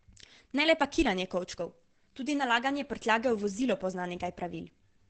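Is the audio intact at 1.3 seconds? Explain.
No. At 1.3 seconds the speech is damaged, as it is across the whole clip, by what is likely Opus compression in its SILK speech mode. Working near 12 kbps, the encoder models the voice with a compact predictive description rather than keeping full spectral detail, and caps the band at wideband, so nothing remains above 8.7 kHz. The result at this moment is heavily degraded: muffled, dull and hoarse, with a rough, lossy edge.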